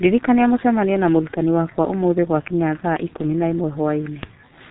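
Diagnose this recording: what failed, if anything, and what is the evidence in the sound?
The failure is at the codec stage: heavy G.723.1 codec damage across the whole clip. Nothing survives above 3.8 kHz, so the speech sounds muffled. Consonants smear and voicing turns hoarse. That coarse, slowly updated voice model points to roughly 6.3 kbit/s.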